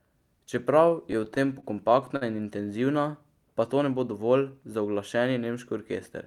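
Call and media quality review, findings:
Repeated stalls (stutter), 0.89–2.23 s, speech. About ten short holds, longest 50 ms, roughly 160 ms concealed in total, about 12% of that span. Nothing lost, but delivery drags. Probable component: jitter buffer draining under late or slow packet arrival, with receiver concealment repeating the last sound. Spectrogram: brief smeared horizontal streaks where harmonics freeze. Waveform: repeated near-periodic stretches, the longer ones fading.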